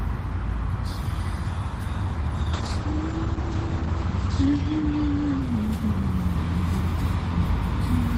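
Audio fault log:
2.57–7.15 s, call bitrate drop: The top end falls away above 8 kHz, down from a full 20 kHz, and the sound turns rough and muffled. This fits the encoder dropping from 32 to 10 kbps. It sits at its worst for about 2 s.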